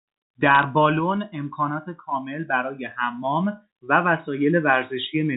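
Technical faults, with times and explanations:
0.55 to 0.63 s, bit errors on a digital phone line: a brief burst of sharp ticks and crackle sits over the speech. Flipped bits in the G.711 mu-law stream each corrupt one sample; sign or high-bit hits jump the waveform abruptly, at roughly 0.2 percent.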